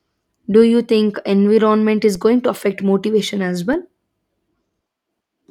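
At 2.15 s and again at 3.73 s there's a DC step, the baseline jumping about -24 dBFS, each a low thump that drains away as a 20 Hz high-pass lets it decay.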